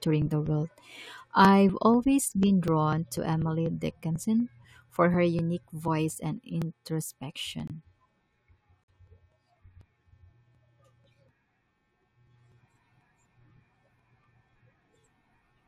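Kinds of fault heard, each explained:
Periodic USB or driver dropouts: Throughout the speech, from about 0.22 s to 15.47 s, a small slice of audio goes missing every 0.25 s. Each loss is roughly 4 ms and is skipped outright, not filled with silence. The sound simply jumps ahead. Because the gaps are so evenly spaced, they come across as a steady train of ticks, around seventy in all. Something is interrupting the bus or driver on a fixed cycle.
Corrupt frame muted: Twice the audio drops into sudden silence because the decoder rejected a damaged compressed frame and the player muted it. The first hole opens at 7.68 s and lasts about 35 ms, one frame's worth. The second, at 8.86 s, spans two frames but is only about 15 ms long. Both start abruptly with no fade. The surrounding timing stays intact, so nothing shifts afterwards.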